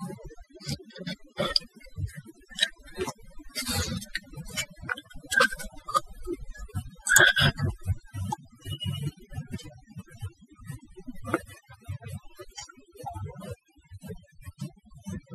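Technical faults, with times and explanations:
Throughout, overdone noise removal: background drops and breaks up into twinkling specks, because overly strong noise reduction shut down bands near its noise estimate, quiet speech included.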